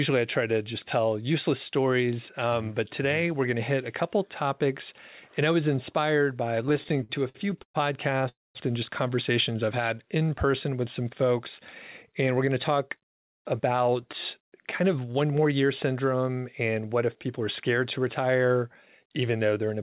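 From 6.66 to 7.76 s, packets kept arriving late, so the jitter buffer ran dry again and again. This produces repeated stalls (stutter): 13 small gaps, up to 121 ms each, are bridged by extending the preceding sound. Together they fill 326 ms, about 30% of the span, so the audio drags and judders without losing anything.

From 8.18 to 8.22 s, one packet missed its slot and the receiver filled 15 ms until it arrived. This short stall from a late packet holds a sound slightly too long, with a slight buzz or dip, and the audio then picks up where it stopped.

From 8.29 to 8.57 s there is a call audio freeze, likely caused by packets being held up on the way. The last sound is carried on briefly and then fades, leaving about 210 ms of silence inside a 262 ms inserted gap. The audio then resumes at the same point, now 262 ms later than before.

From 9.51 to 10.52 s, the jitter buffer slow-down rebuilds its reserve by repeating tiny pitch-period or pause fragments, adding 123 ms. 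Playback runs at 89% speed with unchanged pitch, so sounds come out drawn out.

Jitter buffer speed-up follows at 12.47–13.96 s and 14.41–15.53 s, both at 108%, and at 19.29–19.78 s at 111%. The receiver is draining excess buffered audio by cutting short pitch-period slices, around 150 ms, 100 ms and 70 ms in total. The audio sounds hurried while its pitch stays the same.

Throughout, nothing is heard above 4 kHz, which fits a G.711 mu-law call codec at 64 kbps.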